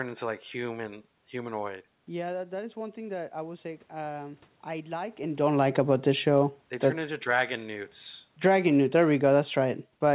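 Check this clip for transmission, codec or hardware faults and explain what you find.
Automatic gain falling occurs twice, from 5.3 to 7.48 s and from 8.3 s to the end. Judging the input too loud or its background noise too strong, the gain control lowered its gain gradually, by about 4 dB in the first stretch, so speech and room noise sink together. The band stops at 4 kHz, consistent with a G.711 call path.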